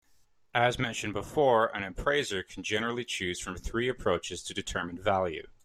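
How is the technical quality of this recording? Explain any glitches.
No glitches or technical faults are audible anywhere in the recording.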